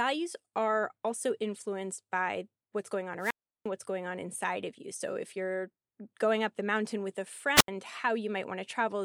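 At 3.19 s the speech breaks up in a wireless microphone squelch dropout lasting until 3.67 s. Hiss rises briefly. Then the output falls to near silence for about 351 ms before the speech returns. The radio link from the FM transmitter faded too weak, so the receiver's squelch muted the signal. A second, shorter dropout follows at 7.55 s to 7.68 s, with a hole of about 78 ms.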